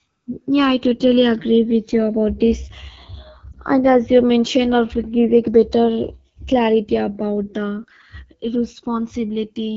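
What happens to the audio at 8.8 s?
At 8.8 s the speech carries two faults that run through the whole clip. The first is channels drifting apart. The two channels run on clocks that disagree by roughly 200 parts per million, so the delay between them keeps growing and reaches about a millisecond near the end. At 8.8 s, heard in mono, the comb notches sit lower and closer together than at the start. The sound is a slow, creeping flange. A fixed delay would give a static hollow tone instead. Here the colour keeps moving.

The second is the AMR wideband (HD Voice) codec, and its damage is plainly audible. The speech has a rough, raspy, buzzy grain, which points to one of the codec's lowest rates, around 8.85 kbit/s. The detail above about 6.4 kHz is replaced by shaped noise rather than real content. A narrowband phone codec would cut the top off completely. Here shaped noise fills that band while the lower voice sounds gritty.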